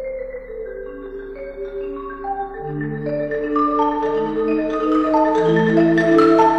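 Nothing stood out on listening; no moment in the audio drew attention as a technical problem.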